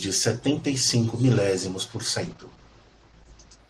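At 2.23 s a call bitrate drop hits: the encoder's budget collapses, pointing to a fall from 32 to 11 kbps, and the audio band shrinks from 20 kHz to 8 kHz. Until 3.65 s the speech turns muffled and coarse, bottoming out for 1.33 s.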